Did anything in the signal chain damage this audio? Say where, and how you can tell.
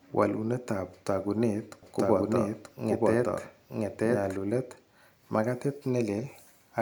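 Yes. From 1.83 s to 4.37 s there's a doubled audio track: a second full-band copy of the speech, at about the same level, trailing around a second behind, with no decay or room colour and hard edges. Likely an edit or storage stage holding two offset copies.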